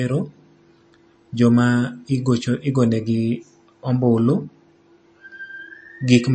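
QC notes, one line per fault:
throughout, MP3 compression: likely a starved MP3 encode, at a bitrate near 33 kbps by the sound. The encoder drops everything above 8.4 kHz and switches weak frequency lines on and off between frames, so the speech sounds dull, watery and swirly, with smeared onsets.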